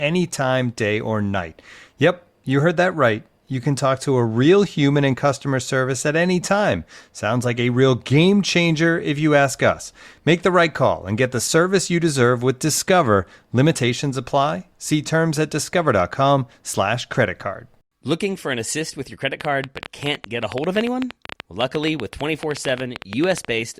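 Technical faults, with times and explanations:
19.41 to 23.46 s, train of clicks: right after "assist with your credit", roughly forty similar clicks arrive at an irregular pace averaging 10.6 per second, about 10 dB above the speech, ticking through pauses as well, likely from interference or a faulty connection or power supply.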